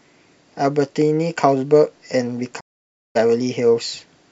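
At 2.59 s the speech fades out over about 20 ms into silence and stays muted until 3.17 s, a gap of roughly 0.54 s. This is a digital broadcast dropout: the receiver lost valid frames, muted, and resumed later, so whatever was transmitted meanwhile is simply gone.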